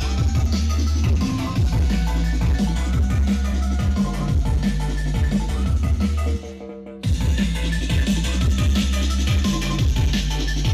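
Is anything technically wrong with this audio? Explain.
No, nothing technically wrong can be heard in this audio; the signal stays steady and intact throughout.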